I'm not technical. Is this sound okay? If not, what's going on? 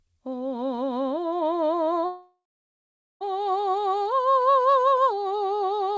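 No. At 2.06 s the music stalls into a brief fading buzz, then near-silence, resuming intact at 3.23 s: a call audio freeze, likely from delayed network packets.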